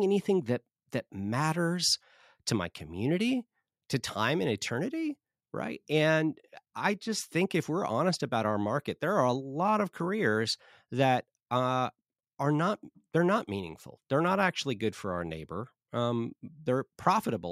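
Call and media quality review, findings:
No faults found in review.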